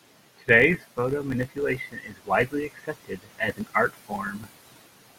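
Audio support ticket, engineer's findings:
Filter restarted on every block, 0.47 s to end. Steady buzz near 46.9 Hz riding on the speech, louder on loud passages and fading in quieter ones. Probable component: block-based filter dropping its state, each block starting from silence and leaving a small onset transient. Rate fits a 1024-sample block. Waveform: evenly spaced tick discontinuities about 21 ms apart. Spectrogram: thin vertical lines at that spacing, plus a harmonic comb from 46.9 Hz upward.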